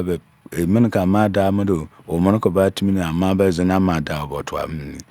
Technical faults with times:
none

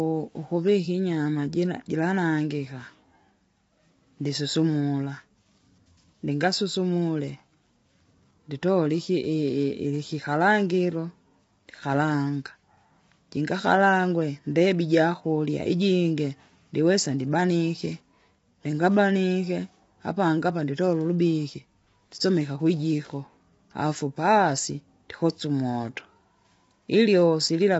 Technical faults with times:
0.00-27.79 low-delay AAC compression

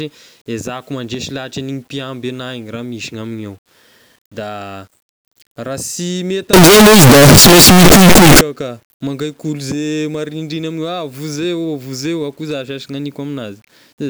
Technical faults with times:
6.53-8.41 signed and unsigned mixed up

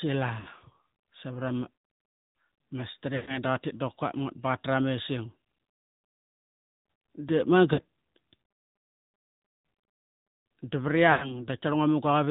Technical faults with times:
0.00-12.31 AMR narrowband mobile codec
0.40-0.48 lost AMR speech frames
3.16-3.38 lost AMR speech frames
7.74-7.81 lost AMR speech frames
11.12-11.47 lost AMR speech frames

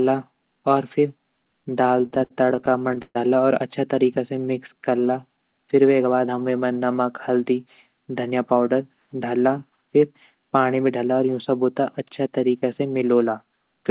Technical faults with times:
2.02-3.17 repeated stalls (stutter)
4.35-5.28 jitter buffer slow-down
7.29-8.53 jitter buffer speed-up

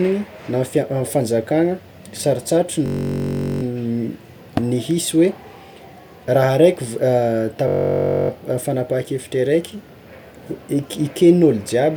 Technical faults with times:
2.86-3.63 system hang loop
7.68-8.30 system hang loop

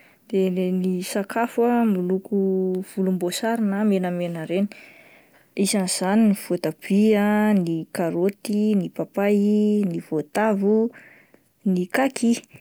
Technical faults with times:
none

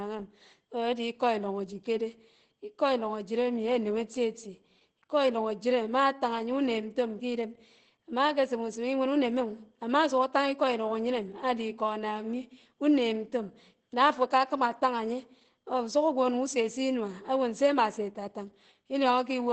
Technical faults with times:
0.00-19.52 Opus compression

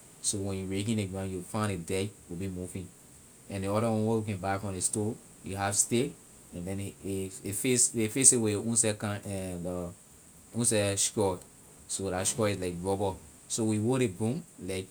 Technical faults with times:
none

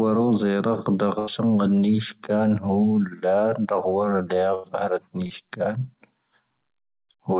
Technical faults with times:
1.19-1.30 burst of packet loss
4.54-4.67 burst of packet loss
5.27-5.33 short concealed packet loss

